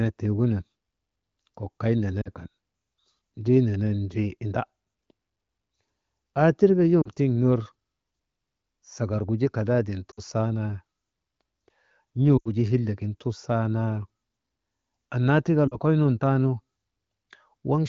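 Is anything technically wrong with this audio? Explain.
Yes. The speech has lost AMR speech frames at five points: 2.21 to 2.29 s just after "kok kay", 7.01 to 7.11 s just before "tiŋ ner", then 10.12 to 10.20 s, 12.37 to 12.48 s and 15.67 to 15.78 s. Radio errors corrupted these frames, so the AMR wideband decoder repeated its last good pitch and vocal tract settings at falling gain. The result is the voice dropping to near silence within two frames rather than a hard click, and after the longest gap, about 80 ms at 12.4 s, speech returns weak or rough for a moment. The underlying HD Voice coding stays clear, with only light codec colouring.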